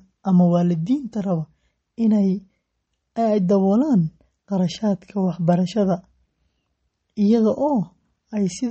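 Throughout this speech clip, a lossy encoder likely starved of bits, consistent with MP3 compression at a low rate, which fits about 32 kbps, has cut everything above 8.4 kHz and dropped the weaker frequency lines, which flicker in and out from frame to frame. The result is plainly audible damage: dull, band-limited speech with a watery, swirling texture, metallic chirps on s sounds, and consonant attacks that smear rather than snap.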